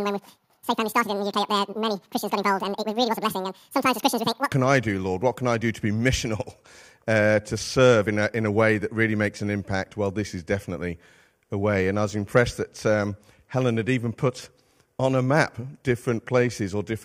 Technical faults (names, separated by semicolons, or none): audio read two samples at a time (double speed)